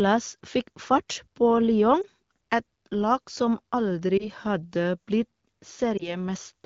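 At 2.02–2.07 s, 4.18–4.29 s and 5.97–6.17 s, lost AMR speech frames, each consistent with one 20 ms frame, cause brief dips or warbles as the decoder repeats prior pitch and vocal-tract settings at falling gain. Spectrograms show smeared, dimmed harmonics; waveforms show momentary envelope sags.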